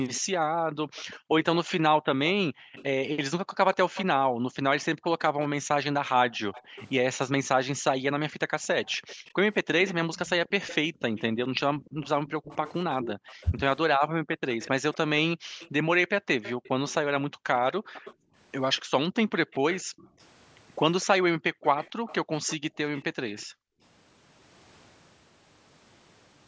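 Echo leak, 0.14 to 4.05 s: a faint delayed copy of the speech trails the talker by 243 ms, sitting roughly 15 dB below it. The far end is playing the call over a loudspeaker, and its echo canceller likely failed to strip out what its microphone picked up, so that sound was sent back. Like the rest of the audio, the echo carries nothing above 8 kHz.

Speech suppressed in double talk, 0.21 to 23.82 s: across about ten seconds spread through this span, the talker's level repeatedly sags, at worst by around 40 dB, with stretches going dull or breaking into fragments. This is likely the echo canceller hearing both sides at once, failing to tell the local talker from loudspeaker echo, and turning everything down together.

The echo leak returns at the same 243 ms delay in brief bursts at 5.20 to 5.47 s and 6.53 to 6.85 s, each about 20 dB down. It then runs for longer from 8.86 to 16.94 s at about 15 dB down, and again from 17.93 to 23.43 s at about 20 dB down, as a ghostly doubling behind the speech.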